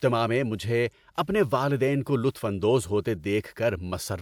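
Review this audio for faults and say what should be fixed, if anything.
Nothing to fix; no faults found in this speech recording.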